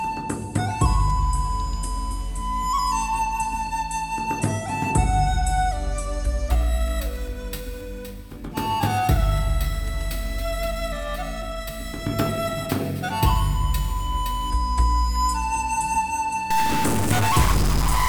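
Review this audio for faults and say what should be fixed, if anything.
From 6.50 s to 14.50 s there is periodic clock jitter at around 2 kHz. A steady interference tone is modulating the converter's sampling clock, so every component of the sound picks up sidebands spaced about 2 kHz above and below it, with the higher-frequency content hit hardest. The result is a rough, metallic edge on the sound. Prevent it by isolating the converter clock from the interfering source with clean supply filtering and shielding.

From 16.51 s to the end of the clip there is distortion, with noise that persists into quiet moments instead of dropping away. The likely cause is a stuck bit, where one data bit is held at a fixed value by a broken line or converter fault. Roughly half the samples are then off by that bit's weight in a waveform-dependent pattern, and the bit flips with the sign of small values, which fills the pauses with noise. 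Prevent it by checking the converter's data lines and connections and replacing the faulty hardware.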